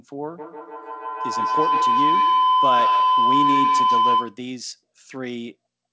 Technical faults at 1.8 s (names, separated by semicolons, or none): feedback howl